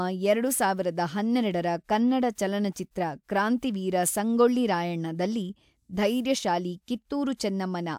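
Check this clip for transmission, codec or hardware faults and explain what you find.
No faults were detected.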